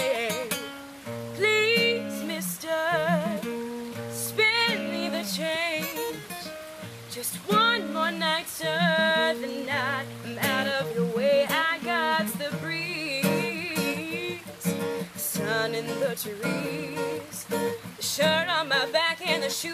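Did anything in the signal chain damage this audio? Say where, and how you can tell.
No, nothing in the signal chain damaged this audio. Listening through, no stage from capture to playback leaves any audible trace of trouble.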